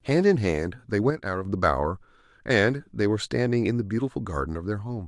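From 1.10 to 1.45 s the speech suddenly drops by about 6 dB, then returns; likely one channel drops out, halving the mono sum.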